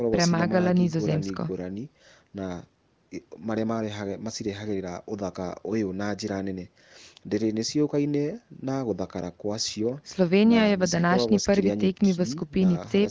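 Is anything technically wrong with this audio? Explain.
No, nothing in this speech recording points to a technical fault, with its content stopping at about 8 kHz as expected from a call's microphone processing and its AMR wideband (HD Voice) coding at 23.05 kbit/s leaving at most faint traces.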